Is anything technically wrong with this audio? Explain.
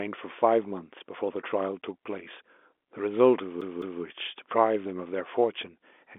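Yes. From 3.61 to 4.03 s the speech skips like a CD stuck on one turn. The laser is thrown back each revolution, so a 0.21 s slice repeats twice, with short mutes at each jump.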